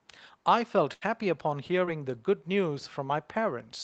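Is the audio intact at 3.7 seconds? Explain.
Yes, the speech at 3.7 seconds is intact, with no dropout, click or distortion at that moment.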